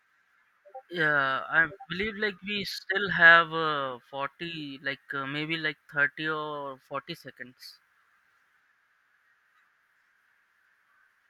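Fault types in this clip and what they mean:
Nothing here to flag: the speech comes through without any technical fault standing out anywhere along the way.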